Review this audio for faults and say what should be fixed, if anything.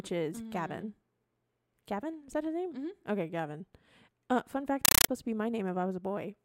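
From 4.85 s to 5.09 s, between "fun fact" and "to be", the speech is replaced by loud, chattering static: a compressed stream played as audio. Encoded frames are being passed through as if they were PCM samples. Each frame lands as a harsh burst of about 8 ms followed by digital silence, repeating at 31.25 per second, which fits an AC-3 bitstream at roughly 384 kbps. To prevent it, the receiving device must detect the IEC 61937 bitstream flag and decode it, or be set to request PCM only.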